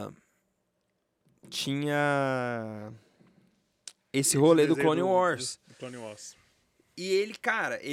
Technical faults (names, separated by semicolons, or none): none